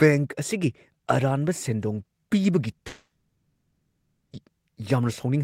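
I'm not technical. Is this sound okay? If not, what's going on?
No. There is a long network dropout from 2.87 to 4.35 s: the speech suddenly turns into a brief fading buzz, then about 1.2 seconds of silence, and picks up later with that part missing. The likely cause is audio that never arrived over the connection.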